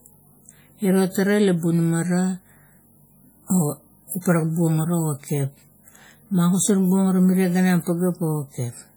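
From start to finish the speech carries heavy WMA compression damage, likely from a low-bitrate encode, which fits about 32 kbps. Long transform blocks smear quantisation noise across tens of milliseconds, so the speech rings and washes, and a hiss rises and falls with the voice rather than sitting steady like background noise.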